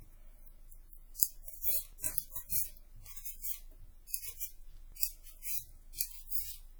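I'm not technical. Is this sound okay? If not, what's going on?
No. Throughout, the audio has plainly audible compression damage: a ringing, washy quality and a hiss that swells and fades with the sound. That points to WMA compression as the likely cause; the encoder discards detail and smears its errors over short stretches of time.

At 4.92 s there is a quick skip where a few milliseconds of audio are missing between chunks. The recorder likely handles sound in blocks, and it dropped a sliver while switching blocks, then joined the edges with no gap.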